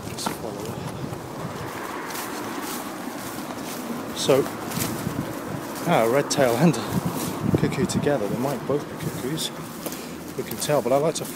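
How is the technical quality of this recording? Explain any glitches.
No glitches turn up anywhere in this recording, so there's nothing here that needs explaining.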